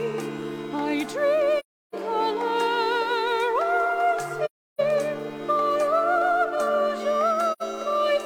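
At 1.59 to 1.94 s and again at 4.45 to 4.80 s, the audio falls into a hole about 0.34 s long, which fits eight consecutive lost AAC frames. A shorter gap of about 85 ms follows at 7.52 to 7.63 s, consistent with two frames. This is AAC frame loss with muting: the decoder zeroed the missing spectrum, and the overlapping windows fade the sound out and back in. Those soft edges set it apart from a hard sample dropout.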